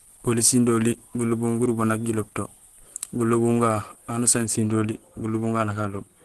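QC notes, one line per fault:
throughout: Opus compression, likely the cause of the grainy, hoarse texture. Nothing is heard above about 12.3 kHz, a super-wideband limit, and the voice has a rough, muffled edge, the sound of the speech-oriented hybrid mode at a low rate near 16 kbps. Unlike MP3 damage, there is little swirling or watery chirping from spectral holes. Bands stay filled, so the damage comes out as noisy roughness, not gaps.
4.46–6.24 s: de-emphasis applied wrongly. From 4.46 s to the end, the treble falls away, about 8 dB down at 10 kHz relative to 1 kHz, so the sound turns dull and muffled. A treble cut meant to undo pre-emphasis is acting on audio that never had the boost, or has been applied twice. What tells it apart from a low-pass filter or the codec's bandwidth ceiling is the smooth, gradual slope with no sharp edge, and that it begins partway through.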